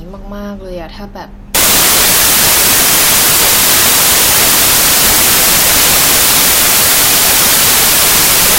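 At about 1.55 s the speech turns into samples built from the wrong bytes, and it stays that way to the end. The reader is assembling each sample with its bytes misaligned or swapped, so the jittery low bits become the loud part, giving a wall of harsh broadband noise.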